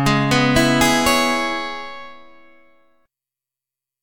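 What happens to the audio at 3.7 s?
Nothing goes wrong at 3.7 s; the audio plays through that moment intact, with no dropout, click or other fault.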